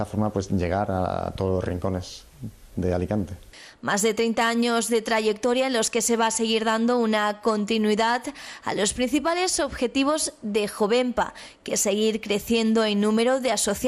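MP2 compression damage runs through the whole clip: the sound is dull and carries a gurgling, granular grit, likely from MPEG Layer II coding at a low rate, around 80 kbps. Starved of bits, upper sub-bands drop out and flicker, while the remaining bands are coarsely quantised.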